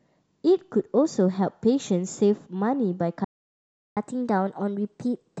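At 3.24 s the speech cuts out mid-flow and stays silent for about 0.72 s, resuming at 3.97 s. This is a playback stall: the player most likely ran out of buffered data or had its output thread blocked, so nothing reached the output until it recovered.

From 3.97 s to the end, the speech runs quicker and sits higher in pitch, by roughly a semitone and a half. This is catch-up at higher speed: the player resamples its backlog at 1.1 times normal rate to recover the time lost in the stall, which raises speed and pitch together.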